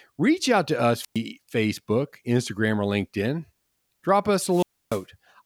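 Just after the 1-second mark, from about 1.00 to 1.19 s, the speech hits a wireless microphone squelch dropout: the FM radio link fades, a little hiss swells up, then the receiver's squelch mutes everything for roughly 110 ms before the voice snaps back. It happens again from 4.47 to 5.04 s, and this time the silent hole stretches to about 290 ms.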